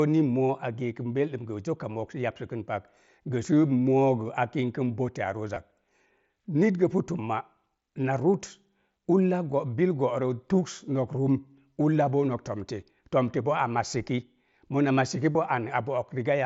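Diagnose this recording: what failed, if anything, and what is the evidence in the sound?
The fault sits in the wireless link: concealed Bluetooth headset packet loss. Short patched gaps occur at 5.55 s, at 11.73 to 11.76 s before "ulla boo nok", and at 15.33 to 15.35 s after "mona massiki". Lost packets left 15 to 22.5 ms holes. The receiver filled each with recently heard waveform.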